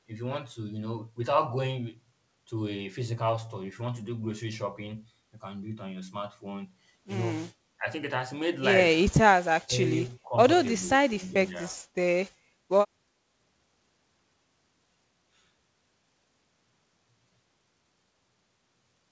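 An echo canceller likely mistook overlapping talk for echo. The result is speech suppressed in double talk at 7.77, 9.57, 9.98 and 10.79 s. Short stretches sink by about 10 to 30 dB, nearly vanishing around 9.6 s, within the call's 8 kHz band.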